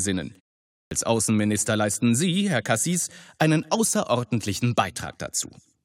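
Speech resumes abruptly at 0.79 s after a 0.47 s pause, with about 122 ms lost until 0.91 s: a clipped start after a pause, from the output device waking late.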